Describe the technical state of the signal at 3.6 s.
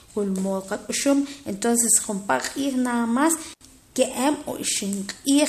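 At 3.6 s the speech hits an intermittent contact fault, spanning 3.53 to 3.63 s: a loose connection opens for about 73 ms, so the signal drops out with crackle at each edge. The waveform shows a near-flat gap bracketed by sharp spikes, and the spectrogram shows broadband clicks around faint hiss.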